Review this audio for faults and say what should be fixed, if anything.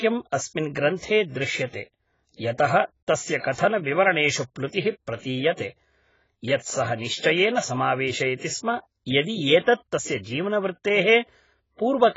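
The speech was most likely squeezed through AAC-LC compression at a very low bitrate, and the damage is heavy across the whole clip. Too few bits per frame force the encoder to lower its cut-off and discard or crudely approximate weaker spectral detail, which points to something in the region of 16 kbps. Nothing remains above 7.6 kHz, so sibilants sound dull and blunted, and sustained sounds take on a smeared, warbling texture. To prevent it, keep an uncompressed or high-bitrate master and encode at a substantially higher AAC bitrate.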